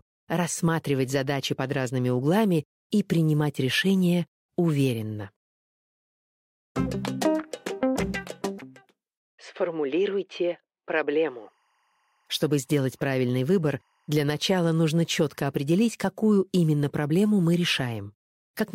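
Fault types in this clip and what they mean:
timecode bleed: 24-frame linear timecode leaks in from a neighbouring track or cable, adding a faint chirping warble near 1 and 2 kHz from 11.09 to 15.52 s.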